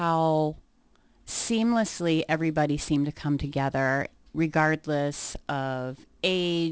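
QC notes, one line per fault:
Throughout: aliasing. The sibilants in this speech come out gritty and metallic, with hiss that doesn't follow the voice's real high end. The rate was cut from 44.1 kHz to 16 kHz with no filter first, so content above 8 kHz folded back beneath that edge as wrong, unrelated frequencies, at roughly 20 dB below the signal. Plain band-limiting would just sound dull. Here the top is busy and runs right up to 8 kHz.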